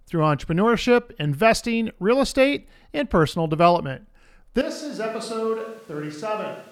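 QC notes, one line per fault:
4.61 s to end: switch to a distant microphone. After "estate and personal development" the speech turns suddenly roomy and hollow, thinner in the bass, about 10 dB quieter, with background noise about 30 dB below speech, likely because the close microphone dropped out, leaving a farther pickup.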